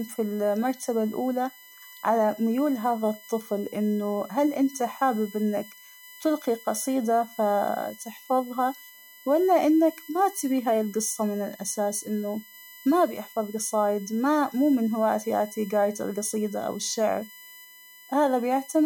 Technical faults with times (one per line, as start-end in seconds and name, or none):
0.00-18.85 USB whine